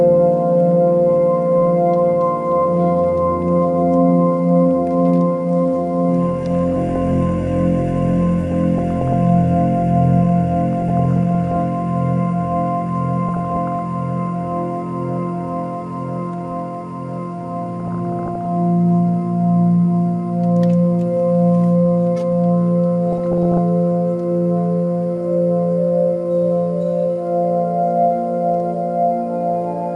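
Throughout, the audio sounds dull and plainly gurgling and granular, with upper frequencies flickering in and out. The likely cause is MP2 coding at a rate that points to around 80 kbps, where too few bits force upper sub-bands off and coarsely quantise the rest. Bursts of DAB burbling, short blips of noise in single sub-bands, occur at 6.72–6.96, 8.52–9.13, 10.70–11.62, 13.28–13.82, 17.80–18.45 and 23.12–23.58 s. They fit weak reception letting a bit error rate of a fraction of a percent corrupt samples and scale factors in the MP2 stream.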